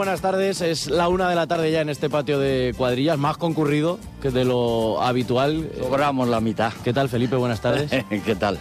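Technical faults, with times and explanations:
1.54–1.63 s: loose connector crackle, a brief irregular burst of scratchy crackle lasting under a tenth of a second. A worn or dirty contact is rapidly making and breaking, chopping the signal on and off, with any DC on the line adding pops.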